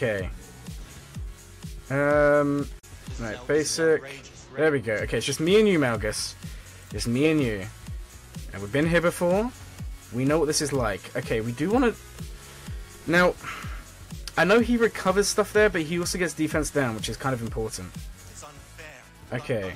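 At 2.79 to 2.84 s there is a digital broadcast dropout: the receiver stopped getting valid data, which fits a single lost or corrupted frame, and muted until good frames resumed. The sound fades out over about 8 ms, leaves a brief hole of roughly 32 ms, then carries on with that stretch missing.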